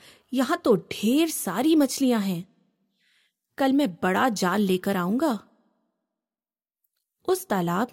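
No technical faults can be heard anywhere in the speech.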